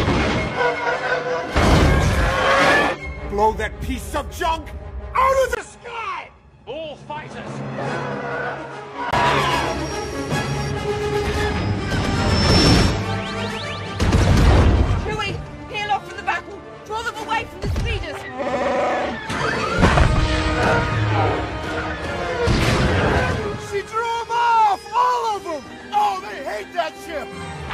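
From 5.55 s to 9.13 s the sound turns dull and boxy, with nothing above 10.5 kHz. It drops about 10 dB in level and a faint new background hiss appears. A 20 ms silence opens the change, and the original brightness returns at 9.13 s. The likely cause is an input switched to a poorer device. A simple low-pass filter would only remove treble, but here the gap, the level drop and the different noise floor all change together.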